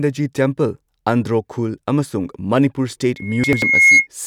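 Right at 3.16 s a loudspeaker feedback squeal kicks in. The mic is hearing its own speaker, and around 2.2 kHz the loop gain tips past one, so that single tone feeds on itself. It swells over roughly three-quarters of a second until it's sitting around 10 dB above the speech, a thin piercing whistle riding on top of everything, and it hangs on until about 4.07 s.

While that whistle is still going, there's a stretch of chunks out of order between 3.44 and 3.62 s. The blocks are about 93 ms each, and one of them plays a chunk late, after the one that should have followed it. Nothing actually goes missing, but the speech jumps back and forth in that spot. You get a short jumbled moment with hard joins where the misplaced piece gets spliced in and out.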